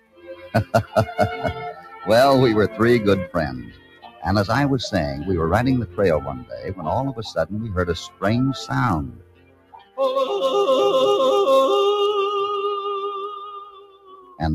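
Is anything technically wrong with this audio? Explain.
Yes. Throughout, a noise suppressor built for speech is working on this non-speech sound. It treats sustained tones, ambience and reverb as noise, so its gain swings by roughly 15 dB. Held material sinks and tails are cut while attacks pass, giving a pumping, fluttering, thinned texture. A compressor's pumping follows loudness, but this follows steadiness.

The sound is cut by the noise suppressor at 0.0–0.95 s (about 18 dB deepest), 1.74–2.07 s (about 8 dB), 3.62–4.23 s (about 16 dB), 6.37–6.86 s (about 15 dB), 8.08–8.24 s (about 17 dB), 9.03–9.99 s (about 18 dB) and 13.29–14.4 s (about 19 dB). Sustains and decays sag or vanish, but onsets survive. That separates these cuts from dropouts, which silence everything.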